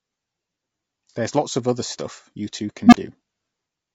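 Throughout the speech the voice sounds rough and grainy, with a hiss filling the gaps between harmonics and a thin, somewhat synthetic top end. This is likely low-delay AAC compression of the AAC-ELD kind used in video calls, and the plainly audible damage points to a low bitrate, around 32 kbps.

From 1.11 to 1.16 s a brief smeared, noisy patch cuts across the speech. This is AAC frame loss with concealment: about 30 ms went missing, consistent with a single lost frame, and the decoder patched the gap by reusing the preceding spectrum.

At 2.86 s a low tone near 200 Hz swells to a loud squeal over about 64 ms, then drops into roughly 43 ms of silence, ending by 2.97 s. An unstable filter causes this: its feedback grew without limit until the output overflowed and the filter reset.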